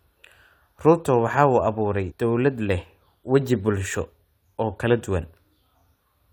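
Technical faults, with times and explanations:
2.10–2.12 s, compressed frames skipped: About a tenth of a second of speech vanishes just before "dawlad leh waji bulsho", fitting a few 23 ms frames. Overlapping frames smear the join into a brief blip.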